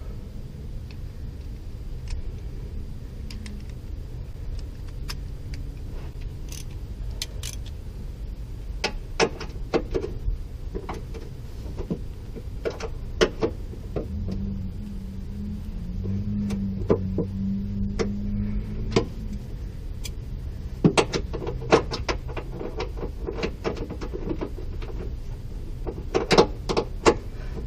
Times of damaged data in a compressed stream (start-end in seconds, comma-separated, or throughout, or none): 18.95